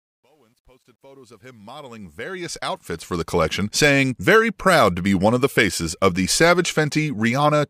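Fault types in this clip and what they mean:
Truncation distortion on a fade, 0.0 to 3.41 s: the speech fades in from the start, reaching full level at 3.41 s, but the gain stage quantises the rising signal without dither, to a resolution that fits roughly 11 bits. Near the bottom of the fade the waveform collapses into coarse square steps, so from 0.0 to 1.68 s the sound is gritty before the steps become fine enough to smooth over.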